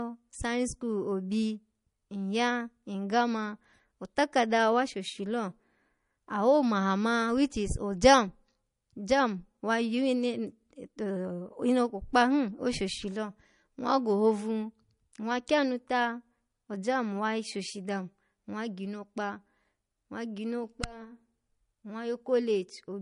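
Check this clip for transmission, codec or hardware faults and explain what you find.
One codec fault is present, and it runs through the whole recording. Likely MP3 compression, throughout: short of bits, the encoder removes everything above 10.6 kHz and zeroes weak frequency lines that switch on and off between frames, which fits a bitrate around 40 kbps. The speech sounds dull and watery, with swirly texture, metallic chirps on s sounds and smeared attacks.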